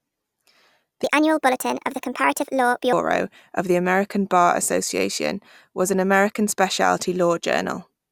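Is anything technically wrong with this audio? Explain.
Yes. From 1.04 to 2.93 s the speech turns high and hurried, about 1.38 times faster and 5.6 semitones up: a wrong sample rate, likely 32 kHz audio played at 44.1 kHz.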